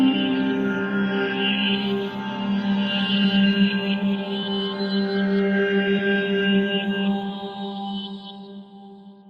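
Nothing here calls for comment, since this bit of sound comes through without any technical faults to point out.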